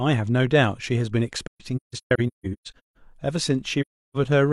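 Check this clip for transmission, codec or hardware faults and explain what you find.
The speech has AAC frame loss with muting in two places. Between 1.47 and 2.97 s, about 0.98 s of sound drops out in scattered holes. The longest lasts roughly 150 ms. From 3.81 to 4.17 s, about 0.34 s is lost. The decoder zeroed the missing frames, so the overlapping windows fade the sound out and back in. Each hole is soft-edged and silent.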